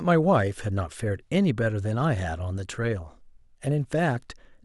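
No technical faults are audible.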